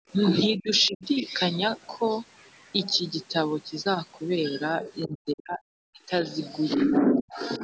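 At the very start, from 0.0 to 0.09 s, the echo canceller clamped the microphone down while the loudspeaker was active. The result is background gated by the echo canceller: the room sound falls away by about 40 dB for roughly a tenth of a second, then comes back once the canceller releases.

Between 0.56 and 1.25 s the talker's voice dips sharply, by something like 30 dB at its deepest, in pieces adding up to a little under half a second. The cause is likely speech suppressed in double talk: with both sides talking at once, the canceller could not tell the talker apart from the loudspeaker echo and turned everything down.

At 5.0 to 5.04 s a brief, very faint scrap of a second voice sits far below the talker. It is likely the other side's voice leaking through, a residue of loudspeaker playback that the echo canceller failed to remove from the microphone.

Right after, from 5.06 to 6.23 s, the speech is cut back again, this time much harder, dropping by roughly 40 dB over about 0.7 s in total. 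This is likely double-talk suppression once more, with the canceller attenuating the talker along with the echo.

The final stretch, from 6.75 s to the end, shows the same pattern more mildly. The voice sinks by around 25 dB in fragments totalling about 0.7 s, likely again the canceller suppressing speech during double talk. The call's normal microphone processing is also audible throughout, with nothing above 8 kHz.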